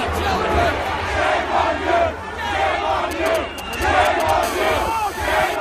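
GSM signalling bursts appear from 3.11 to 4.31 s. A 2G phone close to the recording chain was sending short groups of radio bursts, the kind that precede an incoming call or text, and the audio circuitry rectified them into sound. The result is a galloping dit-dit-dit of brief buzzes repeating at about 217 Hz, sitting roughly 10 dB below the wanted sound and unrelated to it.

GSM phone buzz follows from 4.43 to 5.56 s, once the phone is in a call. It now transmits continuously in bursts 217 times a second, and rectification of those pulses turns into a hard, raspy 217 Hz buzz rich in harmonics. It holds nearly steady through to the end of the affected span at about 16 dB below the signal, with no connection to the sound being recorded.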